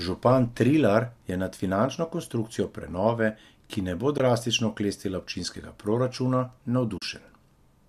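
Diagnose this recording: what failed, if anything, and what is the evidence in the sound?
AAC frame loss with muting at 4.18–4.20 s, after "prenove ki ne bo", and at 6.98–7.02 s, after "drastično oklestila občinskega proračuna". This is a network/codec-stage fault. Missing frames were decoded as silence, and the overlapping windows soften each gap. The 20 ms and 40 ms holes fit the short frames of a likely low-delay AAC stream.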